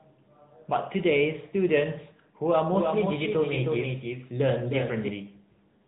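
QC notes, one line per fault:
Throughout: AMR narrowband mobile codec. The speech sounds buzzy and synthetic, with nothing above 3.8 kHz. The codec rebuilds the voice from a vocal-tract model driven by sparse pulses every 5 ms, and the plainly audible damage fits a mid-rate mode near 10 kbps.
2.72 to 5.08 s: doubled audio track. A full-band second copy of the speech trails about a third of a second behind, a few dB quieter and dry, and it starts and stops abruptly. This is likely a second capture through a slower path mixed back in.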